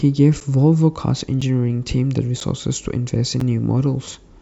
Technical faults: periodic USB or driver dropouts

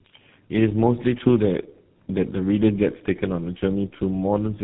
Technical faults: tandem speech coding

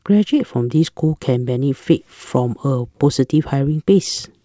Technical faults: none

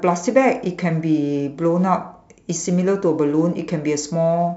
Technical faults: none

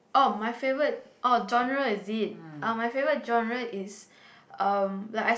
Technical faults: none

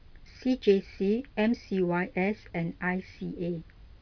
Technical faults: none

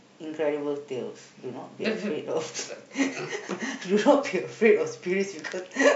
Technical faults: none

